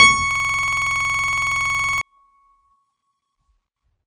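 Throughout the music, the ringing, washy smear, breathing hiss and absence of anything above 10 kHz are likely WMA compression, pointing to a low bitrate of around 32 kbps.

From 0.31 to 2.01 s, a system hang loop repeats one 46.44 ms slice at 21.5 Hz, a machine-gun stutter that fits a frozen 2048-sample buffer.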